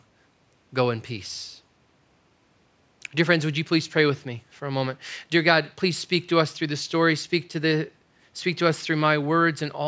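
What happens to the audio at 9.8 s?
Nothing goes wrong at 9.8 s; the speech carries on intact there, with the room's background noise sitting about 44 dB below it.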